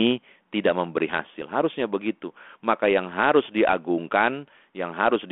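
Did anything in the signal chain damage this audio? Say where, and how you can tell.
No, no stage in the chain damaged this speech.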